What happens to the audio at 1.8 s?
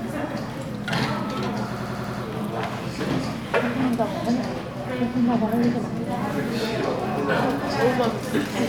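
Right around 1.77 s the sound gets stuck in a system hang loop until about 2.23 s. The driver stalls while the hardware keeps replaying its ring buffer, so a 93 ms slice repeats five times at about 10.8 Hz, a machine-gun stutter that fits a 4096-sample buffer.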